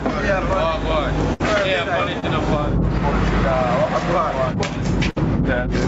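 Throughout, the input gain is likely set far too high, with a fast limiter pulling it down on every loud sound. The result is gain pumping: the background swells in the gaps and ducks by roughly 10 dB under each loud sound, squashing the dynamics.

From 1.33 to 1.42 s, a burst of packet loss: the receiver held and faded the last sound for about 62 ms, then resumed with roughly 40 ms of audio skipped.

From 2.20 to 2.24 s, a short concealed packet loss: about 27 ms was synthesised from the preceding sound to cover a 20 ms hole, heard as a brief smear before the real audio blends back.

From 5.10 to 5.18 s, a second burst of packet loss: about 56 ms of fading continuation fills the gap, and playback jumps ahead past about 60 ms of missing audio.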